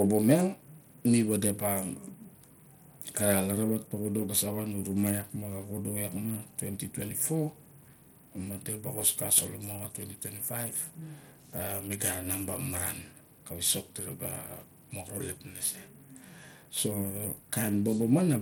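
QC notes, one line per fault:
Throughout, Bluetooth SBC compression: the link likely coded the speech as SBC at a small bit pool, fitting roughly 96 kbps, leaving upper sub-bands starved of bits. Treble flickers, gritty aliased noise rides along, the damage is plainly audible, and nothing sounds above 19.7 kHz.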